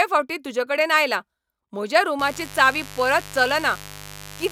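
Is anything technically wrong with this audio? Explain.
Yes. From 2.19 s to the end of the speech at 4.52 s, a steady, raspy buzz sits under the voice, roughly 20 dB below it. This is mains buzz at 50 Hz: sharp switching spikes from something like a dimmer, a rectifier or an unshielded cable get into the signal twice per mains cycle. This produces a dense stack of 50 Hz harmonics extending into the kilohertz range, which gives the buzz its harsh edge.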